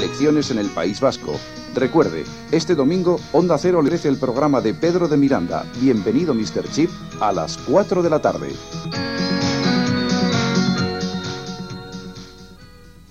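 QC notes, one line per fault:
3.88 s, compressed frames skipped: the audio jumps ahead about 200 ms, consistent with two dropped 92.9 ms frames.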